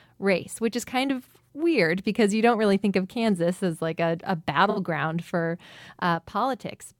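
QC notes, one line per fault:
4.70–4.79 s, AAC frame loss with concealment: just after "as like a a", a short smeared, noisy patch replaces the speech for about 64 ms, which fits three lost frames. The decoder had no data for that stretch, so it rebuilt it from the last good spectrum, reusing its energy with scrambled phase. That gives a brief hazy, phasey blur rather than silence, and the loss is too short to fade into a gap.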